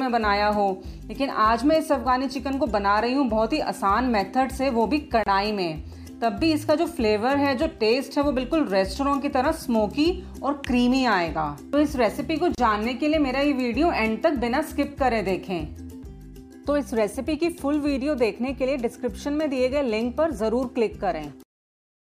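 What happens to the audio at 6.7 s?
Nothing goes wrong at 6.7 s; the audio runs through that moment intact, with no dropout, click or other fault.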